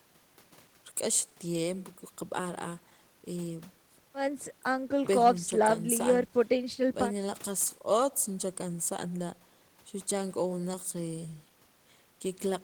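The speech contains no audible technical faults.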